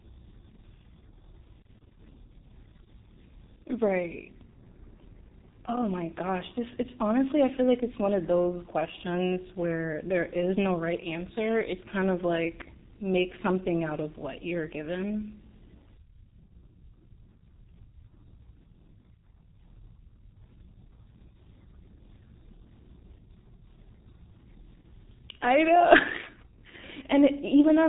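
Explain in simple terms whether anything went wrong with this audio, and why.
Something did go wrong: the whole recording has been squeezed through the G.723.1 codec, an old internet-phone format. It throws away everything above about 3.8 kHz and tracks the voice coarsely, so the speech comes out muffled, hoarse and smeared at the consonants from start to finish.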